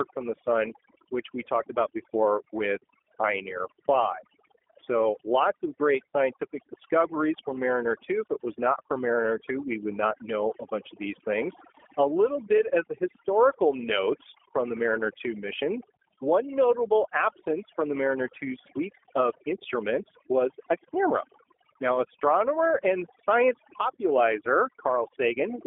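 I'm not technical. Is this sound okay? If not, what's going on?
No. Two problems run through the whole clip.

There is overdone noise removal. A cleanup tool was set too strong. It erased the quiet parts of speech along with the background noise, and left the background twinkling and warbling.

It was also sent through the G.729 codec, a phone-call format. It rebuilds speech from a simplified model and drops everything above about 3.6 kHz, so the voice sounds boxed-in, rough and synthetic.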